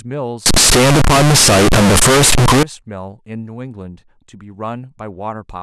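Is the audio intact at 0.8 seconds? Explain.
No. From 0.46 to 2.63 s the speech is a float read as integer fault, likely 32-bit float samples decoded as 32-bit integers, so sign and exponent bits set the level. The waveform turns near-square at an almost fixed, high level. Unlike clipping, even pauses and background noise blare as loudly as the voice, though pitch stays followable.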